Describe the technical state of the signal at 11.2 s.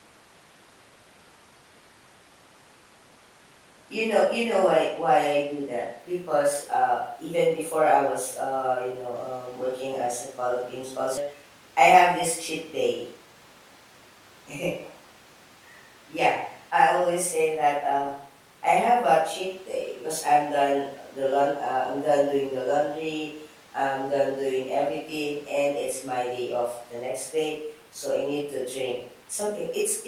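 The sound lurches forward between 11.17 and 11.19 s, with no gap, as if about 0.4 s had vanished and the two sides were spliced together. This is a skip ahead: that stretch was dropped while later audio was already queued, so playback jumped straight on.

From 11.26 to 12.08 s, just before "this cheat", the speech runs hurried but keeps its pitch, at 107% speed. This is a jitter buffer speed-up: holding excess audio, the receiver trimmed short pitch-period slices repeatedly, removing around 70 ms to cut delay.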